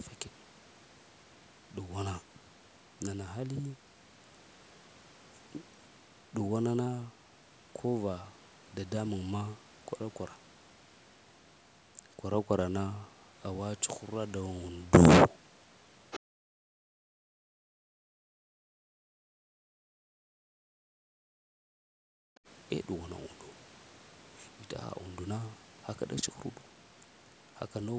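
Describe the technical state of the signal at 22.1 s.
Speech suppressed in double talk runs from 20.38 to 22.17 s, so 22.1 s falls near its tail. The speech sinks sharply, by as much as about 40 dB at its deepest, and breaks up in pieces that add up to around a second and a half. The likely cause is an echo canceller that, with both ends talking at once, could not tell the near talker from loudspeaker echo and attenuated both.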